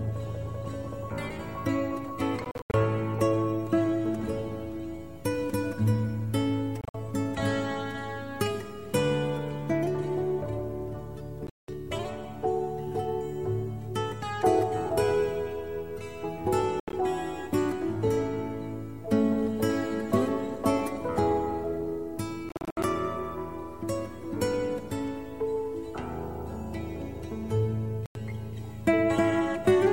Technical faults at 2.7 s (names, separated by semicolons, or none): Bluetooth dropout